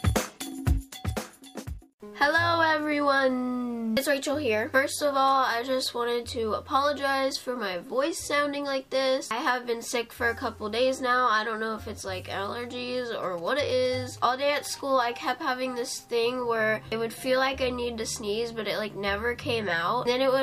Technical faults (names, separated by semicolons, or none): GSM signalling bursts